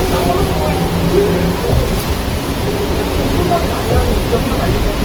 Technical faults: Opus compression

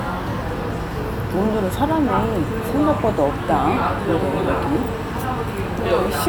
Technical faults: wrong sample rate

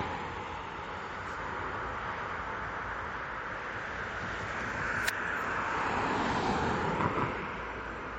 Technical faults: MP3 compression

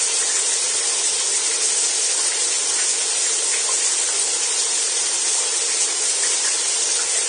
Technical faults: Vorbis compression

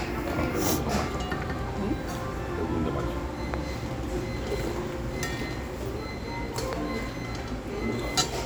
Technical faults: loud pop

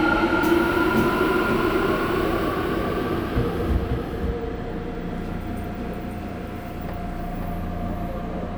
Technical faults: doubled audio track

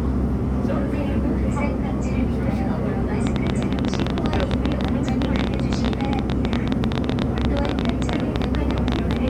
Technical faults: train of clicks

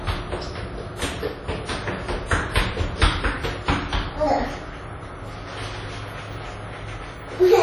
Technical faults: WMA compression

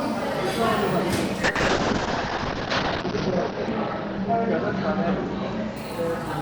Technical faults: call bitrate drop

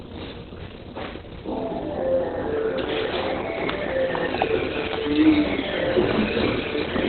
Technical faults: Opus compression

